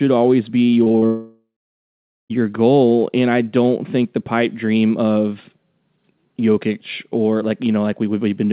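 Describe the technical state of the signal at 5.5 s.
At 5.5 s the speech is intact, with no dropout, glitch or distortion, only the call path's usual narrowband character, nothing above 4 kHz, which fits a G.711-style telephone codec.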